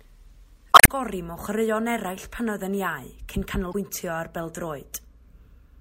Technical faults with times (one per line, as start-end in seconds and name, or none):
0.71-0.89 damaged data in a compressed stream
3.71-3.74 damaged data in a compressed stream